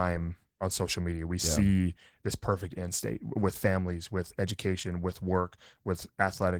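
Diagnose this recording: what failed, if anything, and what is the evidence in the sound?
Codec stage: Opus voice compression throughout, consistent with hybrid mode near 16 kbps; coarse SILK excitation coding leaves the speech plainly hoarse and slightly robotic.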